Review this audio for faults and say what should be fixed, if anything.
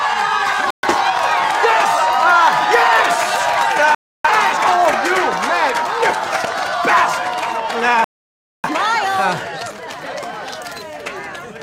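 Three digital broadcast dropouts: the sound cuts out at 0.70–0.88 s, 3.95–4.29 s and 8.04–8.69 s, with roughly 130, 300 and 600 ms of material gone. The receiver lost clean frames and muted until good ones returned. Stronger reception or better antenna placement should prevent it.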